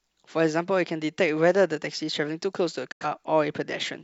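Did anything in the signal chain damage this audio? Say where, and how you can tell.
Yes. At 2.92 s the speech fades out over about 8 ms, the level drops into silence, and the sound resumes at 3.05 s. This is a digital broadcast dropout in the transmission path. The receiver stopped getting valid data, either through signal loss or frames failing their checksum. It muted quickly and stayed quiet until clean frames returned. About 85 ms of programme is missing, which fits two lost frames, and nothing sent during the hole can be recovered.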